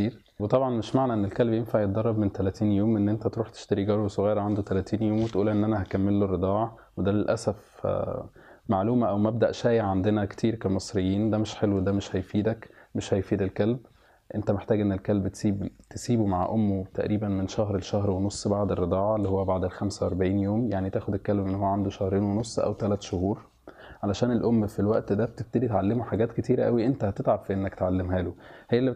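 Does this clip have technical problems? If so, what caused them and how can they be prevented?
No, there are no technical problems in this clip.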